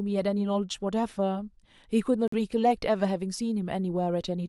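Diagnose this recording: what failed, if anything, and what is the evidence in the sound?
At the codec stage, damaged compressed frames failed the decoder's checks and the player substituted silence for them. The speech drops abruptly into a silent gap from 2.28 to 2.34 s, about 64 ms, which fits two lost frames, and the timing around the corrupt frame muted stays intact.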